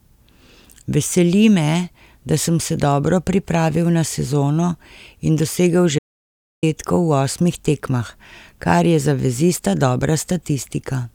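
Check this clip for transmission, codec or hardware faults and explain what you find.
There is one fault, an audio dropout to silence. From 5.99 s to 6.63 s the speech cuts off abruptly mid-flow and the signal falls to silence for about 640 ms, then resumes just as suddenly. The likely cause is that the input was briefly lost, through a disconnected device, a failed link or a stray mute, while recording carried on writing empty samples. A natural pause keeps the room tone, but this gap has none, so it is clearly a dropout.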